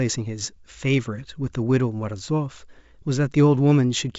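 Nothing goes wrong anywhere in this bit of speech, which comes across as ordinary G.722 wideband telephone audio at 64 kbit/s, with the top end topping out around 7.7 kHz just as that kind of coding would lead you to expect.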